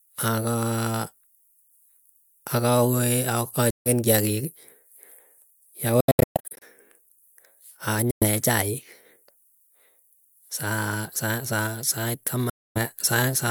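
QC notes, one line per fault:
3.70–3.89 s: Bluetooth dropout. Sound cuts to silence for about 150 ms with hard edges, then resumes further on, as if playback continued; likely late wireless packets discarded.
6.0–6.6 s: Bluetooth dropout run. Repeated short silences across about 610 ms, totalling roughly 430 ms, the longest near 120 ms; likely bursty packet loss on the wireless link.
8.11–8.26 s: Bluetooth dropout. Abrupt gap of about 110 ms, after which the audio picks up later in the stream rather than where it stopped; likely dropped packets.
12.50–12.79 s: Bluetooth dropout. Silence of about 260 ms with sharp edges and no missing time restored afterwards; likely packets arriving too late for the headphone buffer.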